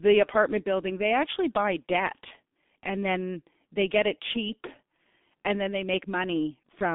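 From start to finish the speech carries G.723.1 codec damage, and it is heavy. Nothing reaches above about 3.8 kHz, and the usable band sits roughly between 200 Hz and 3.6 kHz, so the audio sounds boxed-in and muffled. The coder's slowly updated voice model smears fast transitions, leaving consonants blurred and a hoarse, rough texture on voiced sounds, which fits the low bitrate of around 6 kbit/s.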